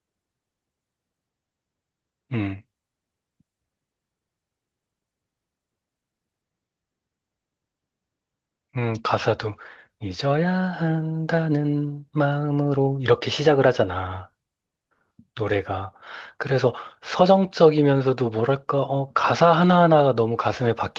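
No technical faults are audible.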